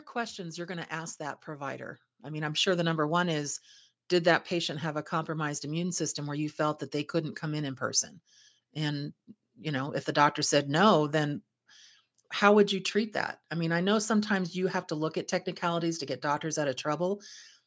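From 0.13 to 2.83 s, the automatic gain control judged the input too quiet and kept turning its gain up, by about 11 dB in all. Speech and background noise swell together over those seconds, settling by "number one is did", with the call's band limit at 8 kHz.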